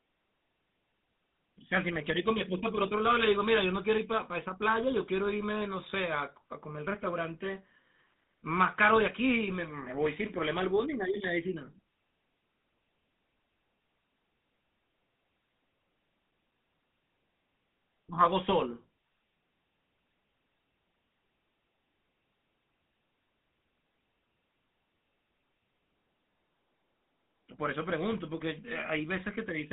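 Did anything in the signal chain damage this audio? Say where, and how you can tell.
Yes, at the codec stage: the GSM full-rate codec colours the speech throughout. Energy sits between 150 Hz and 3.7 kHz, nothing above 3.8 kHz, with a buzzy, gravelly roughness. This fits 13 kbps coding that models the vocal tract and drives it with sparse, regularly spaced pulses.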